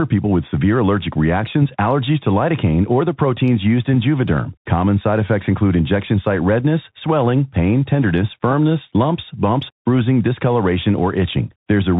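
From start to finish the speech carries a Bluetooth CVSD headset codec sound: it's cut off above 4 kHz, the s sounds go scratchy over a granular hiss, and the character fits 64 kbps one-bit delta coding.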